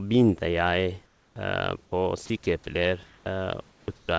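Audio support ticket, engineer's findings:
Background replaced by comfort noise at 1.06–1.36 s, 3.06–3.26 s and 3.98–4.08 s. Steady, featureless hiss, about 7, 3 and 6 dB quieter. Likely receiver comfort noise during discontinuous transmission.

Onset clipped by the voice detector at 1.33–1.36 s (30 ms) and 1.90–1.92 s (20 ms). Abrupt starts, soft attack missing. Likely slow voice-activity detection at sender, so the first frames were not sent.

Sound dropped by the voice detector at 2.26–2.30 s and 2.44–2.46 s. Brief speech gaps filled with steady noise. Likely the detector misread quiet speech as background and paused transmission.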